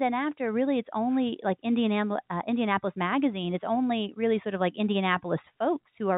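Nothing stood out on listening to this speech passed through a G.711 telephone line.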